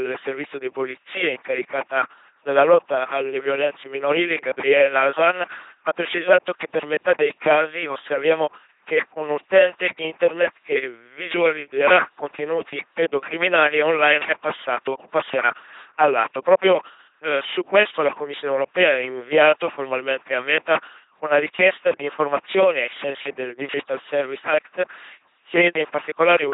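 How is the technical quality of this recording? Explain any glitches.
The recording is heavily degraded by low-rate vocoding across the whole clip.

LPC-10 vocoder, throughout: each short stretch of the speech is rebuilt by driving a ten-pole vocal tract filter with either a pulse train or noise, never a mix, at a rate that fits 2.4 kbit/s. The result is a buzzing robotic voice, with wrong voicing choices turning into buzz or hiss and nothing above 3.8 kHz.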